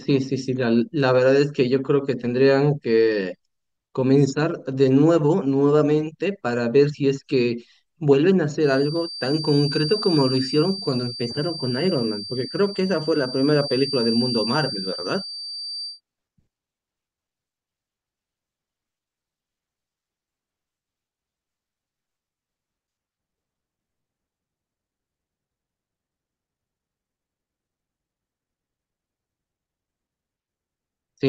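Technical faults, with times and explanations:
8.56 to 16.01 s, feedback whistle: a thin, steady tone at 4.7 kHz sits behind the speech for about seven and a half seconds. It stays roughly 10 dB below the voice and slowly swells and fades in level. It never builds into a howl. This is likely a loudspeaker-to-microphone loop held right at the edge of feedback. At that edge, one high frequency keeps sustaining itself without building further, so a single pure whistle persists.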